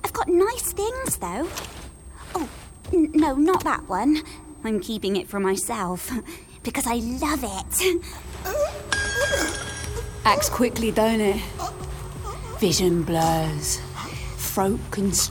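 A switching supply whistle runs through the whole clip: a thin, high tone wandering between about 8.0 and 9.0 kHz, roughly 30 dB below the programme. A switching power supply is operating in an audible burst mode or beating with another one, and its pitch shifts as the load changes.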